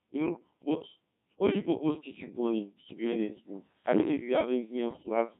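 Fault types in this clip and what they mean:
Codec 2 vocoder: The speech was squeezed through a 1.6 kbit/s vocoder that transmits only pitch, voicing, energy and spectral shape, then rebuilds it from sine waves. Throughout, the speech sounds heavily robotic and buzzy, with the original waveform gone.
Bit errors on digital voice radio: From 4.88 to 5.09 s, corrupted bits, a few in every hundred, reached the vocoder and scrambled its frame parameters. The synthetic speech jumps erratically in pitch, level and tone, warbling into robotic gibberish over a stretch that fits about five frames.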